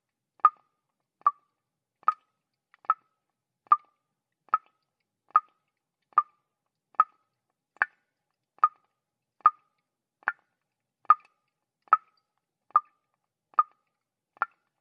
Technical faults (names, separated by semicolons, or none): none